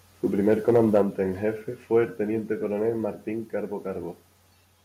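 From 0.51 to 0.98 s the loudest syllables crackle with a hard, flattened edge, likely microphone overload driving peaks about 2 dB past the converter's limit so a small share of their tops are sheared off. Unlike a gain drop, the distortion rides on the peaks without changing the level. At 1.02 s, just before "en jefe fue el", the voice and background fall together by about 4 dB in a single step, likely the microphone volume stepped down by the call software reacting to that overload. A second step of about 2 dB follows at 2.04 s, between "en jefe fue" and "el teniente coronel". These are clean, instant level drops with no added distortion, which separates them from the clipping before them.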